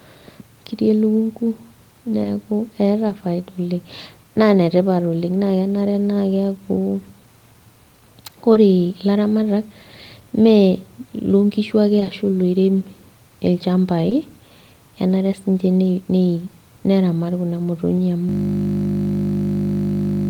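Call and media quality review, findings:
Short concealed packet loss at 2.23 s, 3.07 s, 8.53 s, 11.99 s, 12.03 s and 14.09 s; the 11.99 and 12.03 s losses run back to back. Each is a brief smear or wobble. Jitter buffer and decoder concealment: about 20 ms of audio arrived too late, and the decoder synthesised 20 ms by extending the preceding sound, pitch-based if voiced or shaped noise if not, then crossfaded back. The adjacent pair gives a longer 40 ms smear near 12.0 s.

System hang loop from 18.29 s to end of clip. Steady 50 Hz buzz replaces the audio. Host or audio driver stall: the output hardware kept replaying one 20 ms ring-buffer segment unchanged, so the repeat rate becomes the buzz pitch. The length is consistent with a small period-sized buffer. It never recovers before the clip ends.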